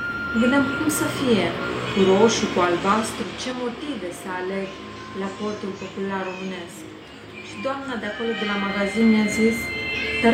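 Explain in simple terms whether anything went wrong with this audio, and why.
Zipper noise from 8.22 to 9.38 s: the volume changes in coarse jumps about three times a second instead of gliding, each jump leaving a small tick.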